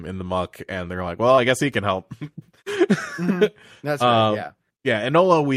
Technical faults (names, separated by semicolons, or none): short concealed packet loss